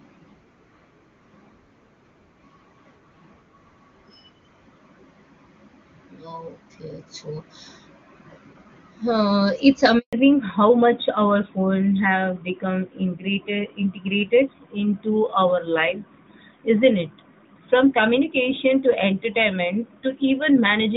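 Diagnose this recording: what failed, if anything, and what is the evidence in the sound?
The network stage failed first, with a handover gap from 9.99 to 10.13 s. The speech dies away within a few tens of milliseconds. Then 140 ms of silence follows. The call was switching networks, and no speech frames arrived meanwhile. Whatever was said then is lost.

The codec stage then shows a fallback to narrowband, from 10.13 s to the end. Before the gap, the AMR-WB HD Voice sound is clear and wideband. Afterwards, nothing remains above 4 kHz, and the voice turns duller and rougher. This fits a drop to AMR-NB at 12.2 kbit/s.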